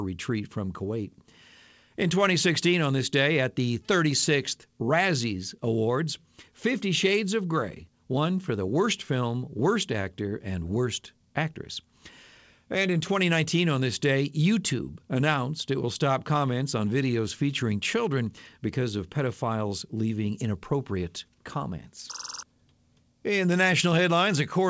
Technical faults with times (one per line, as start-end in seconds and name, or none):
none